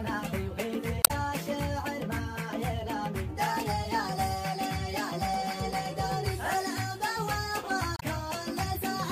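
At 1.01 s and again at 7.96 s there's damaged data in the compressed stream: corrupted bytes throw the decoder off, it loses frame sync, and you get a short glitch, about 0.1 s the first time and roughly 70 ms the second.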